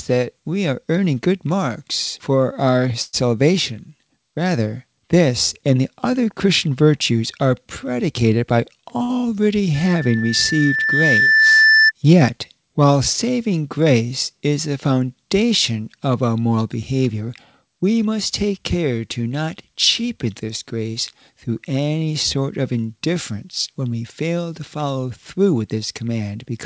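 From 3.02 to 3.26 s, packets were likely held up and the jitter buffer ran dry, causing a call audio freeze: the last sound is stretched into a fading buzz or hiss for about 112 ms before the audio resumes where it stopped, with nothing lost.

Between 8.52 and 8.98 s, an overfull jitter buffer triggers a jitter buffer speed-up, trimming pitch-period slices totalling about 50 ms, so the sound runs at 108% speed with unchanged pitch and feels rushed.

At 9.03 to 9.11 s, a packet missed its slot, causing a short stall from a late packet: the preceding sound is held 62 ms too long with a slight buzz or dip, then continues intact.

From 9.74 to 11.92 s, the microphone picks up its own loudspeaker and the loop gain exceeds one at 1.8 kHz, producing a loudspeaker feedback squeal. That single tone swells over roughly two seconds to about 5 dB above the signal.

From 16.92 to 18.71 s, a second jitter buffer speed-up removes about 150 ms in small pitch-period cuts, again running at 108% and sounding hurried. 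Throughout the clip, the call path leaves nothing above 8 kHz.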